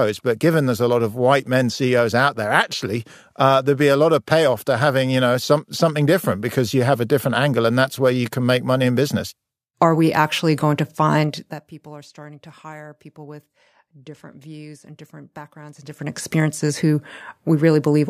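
Zipper noise at 11.2 to 11.7 s, after "we actually going to", then 15.7 to 16.3 s, after "different views and different". Gain moves unsmoothed in 2 dB steps, roughly twenty a second, ticking down about 20 dB, then back up.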